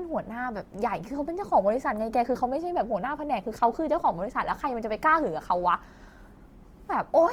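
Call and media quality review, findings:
Speech grainy, rough throughout; audio extends to 20.2 kHz. Likely Opus compression, CELT mode noise-filling starved bands; fits a 24 kb/s rate.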